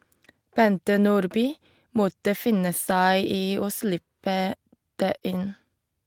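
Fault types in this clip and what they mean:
Lost packet rebuilt from error correction: three brief rough, noisier patches, each 20 ms, just before "måtte finne", before "i å slippe", and near 5.15 s. Each lost packet was replaced by a low-bitrate copy carried in the next packet.
Short concealed packet loss: a brief smear around 5.2 s, where 20 ms never arrived in time and the receiver extended the preceding sound before blending back.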